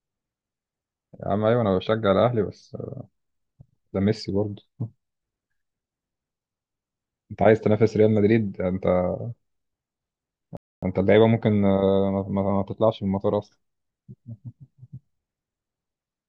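A speech recording with one playback stall. At 10.57 s the sound cuts out mid-flow and stays silent until 10.83 s, a gap of about 258 ms. The output simply stops and then carries on. This is likely the player running short of data, or its audio thread being briefly blocked, so nothing reached the output until it recovered.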